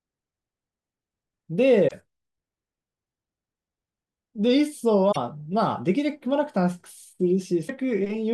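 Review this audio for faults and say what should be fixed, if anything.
Damaged data in a compressed stream corrupted three short stretches, at 1.84–1.92 s, 5.08–5.17 s and 7.64–7.70 s. The decoder misreads those frames and hunts for the next valid header, so each stretch of speech breaks into a brief squawk or blip. Fix the stream's integrity by adding per-frame checksums and retransmitting or re-fetching corrupted data before decoding.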